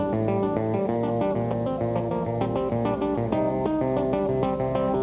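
No technical faults can be heard; the audio comes over a narrowband telephone-style call path with nothing above 4 kHz, which fits G.711 A-law coding at 64 kbps.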